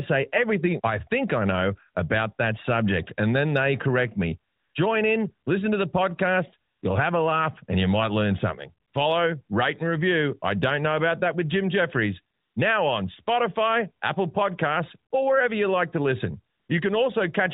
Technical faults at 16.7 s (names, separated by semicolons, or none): AMR comfort noise